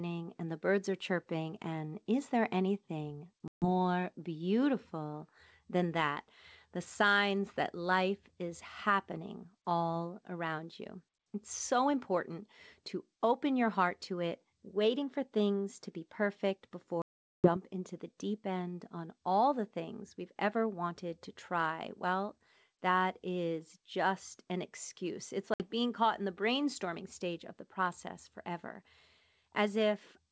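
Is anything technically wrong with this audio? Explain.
Yes. Packet loss on an ADPCM call leaves abrupt silent gaps at 3.48–3.66 s, 17.02–17.57 s and 25.54–25.63 s. The desynchronised decoder then resumes slightly distorted before settling, visible as flat waveform blanks.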